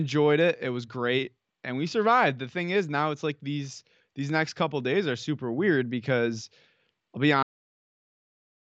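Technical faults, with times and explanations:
7.43–8.69 s, cut-off end: the speech stops abruptly after "I'll be", falling straight to digital silence with no decay because the final buffers were never written out.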